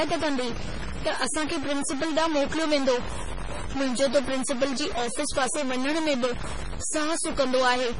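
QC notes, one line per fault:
Throughout, stuck bit: A constant noise-like distortion rides on the speech and carries on into the pauses, rising and falling with the waveform. This is likely one converter bit held fixed, so about half the samples are offset by that bit's weight, and small values near zero flip it with their sign.
Throughout, MP3 compression: The speech has heavy watery, swirling artefacts with smeared onsets, and nothing remains above 10.6 kHz. This likely comes from MP3 encoding at a low rate that fits about 24 kbps, where starved frames zero weak frequency lines that then flicker between frames and the treble is cut off.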